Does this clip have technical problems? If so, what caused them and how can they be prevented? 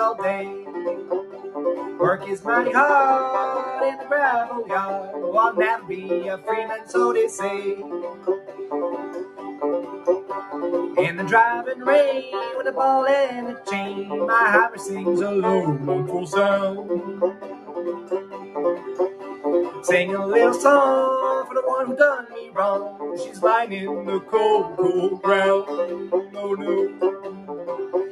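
Yes. A noise suppressor applied to music or sounds is active throughout the clip. A speech-tuned suppressor treats sustained tones, ambience and reverb as noise. Its gain swings by roughly 10 dB, so attacks pass while held sound and decays sink, causing pumping and thinning. Prevent this by bypassing speech noise suppression whenever the source is not speech.

Sound cut by the noise suppressor occurs at 0.41–2.47 s, 5.79–6.94 s, 7.78–10.3 s, 14.7–14.87 s, 16.8–19.85 s, 22.22–23.4 s, 24.21–24.79 s and 26.04–27.5 s. Steady or fading passages dip by about 8 dB, about 6 dB at 14.7 s and about 7 dB at 26.04 s, with tails cut short. Disabling the suppressor, or switching it to a music mode, prevents these drops.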